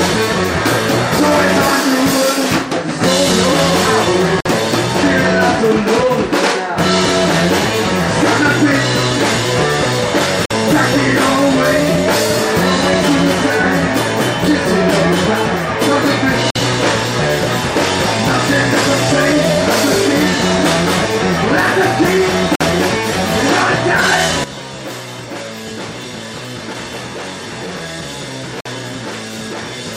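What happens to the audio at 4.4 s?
At 4.41 to 4.46 s there is a gap between chunks: a 50 ms hole where silence sits between two stored or sent pieces. Unlike a dropout, no sound is lost; the audio resumes exactly where it stopped rather than skipping ahead.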